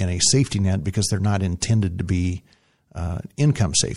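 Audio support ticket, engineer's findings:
MP3 compression, throughout. Plainly audible watery, swirly texture on speech, metallic chirps on s sounds, smeared attacks. Likely cause: MP3 encoder short of bits, cutting treble and zeroing weak frequency lines that flicker between frames; fits roughly 64 kbps.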